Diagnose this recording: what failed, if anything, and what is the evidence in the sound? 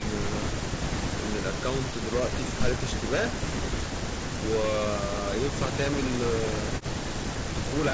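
Nothing failed; this speech recording shows no faults.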